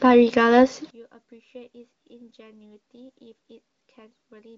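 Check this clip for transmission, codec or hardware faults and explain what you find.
One fault stands out: from 0.9 s to the end the speech collapses to a faint residue, most likely because one channel inverted before a mono sum. With the left and right signals in opposite polarity, the centred speech common to both cancels. The level drops by about 29 dB, leaving a faint trace. A waveform shows the envelope shrinking abruptly at 0.9 s, and a spectrogram shows energy across the band largely vanishing from that point. The wideband speech band from the AMR wideband (HD Voice) codec can still be heard, with at most faint coding artefacts, which fits one of its higher bitrates.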